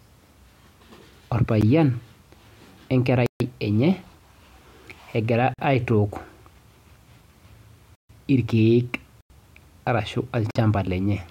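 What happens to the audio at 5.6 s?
A block of digital silence runs from 5.54 to 5.59 s: about 46 ms of audio drops to silence, which fits a 2048-sample buffer left unfilled, leaving a short hole.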